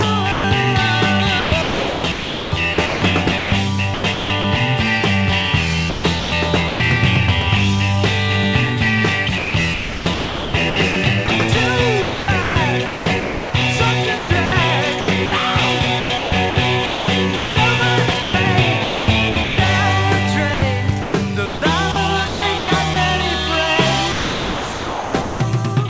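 At 0.32 s the sound drops out for 120 ms and steady noise fills the gap. This is sound dropped by the voice detector. The sender likely judged this part to be background and stopped sending it. The receiver played comfort noise until sending resumed at 0.44 s.

From 1.40 to 4.44 s the sound is chopped by the voice detector. The sender likely switched between sending and muting several times. About 1.56 s of this stretch is lost to comfort noise. Edges and quieter parts vanish. The same choppy pattern returns four more times. From 5.90 to 6.80 s, 380 ms is replaced. From 9.38 to 19.58 s, 3.52 s is replaced. From 20.54 to 22.96 s, 660 ms is replaced. From 24.12 to 25.40 s, 1.2 s is replaced. Throughout, nothing reaches above 8 kHz, which fits a wideband call codec.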